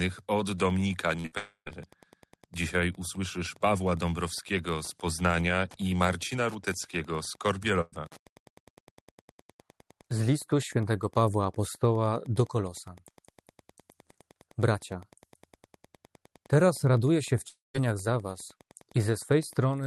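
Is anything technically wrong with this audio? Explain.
Yes, there are three kinds of fault in this speech.

Throughout the clip there is Wi-Fi interference: a faint, steady tick every 102.4 ms, about ten a second, sitting roughly 30 dB below the speech. A nearby Wi-Fi radio's beacon is picked up and rectified by the audio circuitry, so it is heard as a ticking. It stays regular and continues through pauses. That steadiness separates it from network faults, which interrupt the speech itself rather than adding a rhythm underneath it.

A burst of packet loss occurs at 1.19 to 1.26 s and again immediately afterwards at 1.26 to 1.34 s. In each case the receiver stretches the last sound for about 50 ms while roughly 40 and then 60 ms of audio are dropped. A longer burst at 7.81 to 7.94 s fills about 110 ms, dies away to a brief near-silence, and skips about 120 ms. These are short gaps of the kind a call codec conceals. 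A voiced sound becomes a brief held buzz and other sounds become a fading hiss, then the speech resumes with the missing part absent.

A long network dropout is the likely cause at 1.38 to 1.68 s and again at 17.48 to 17.76 s, between "teraz raduję się w" and "za was". Here the concealment runs for about a quarter of a second and fades out, leaving about 100 ms and then 170 ms of silence. Roughly 280 and 260 ms of speech are lost. The audible fade into silence, rather than a brief smear, is what distinguishes these from the short bursts.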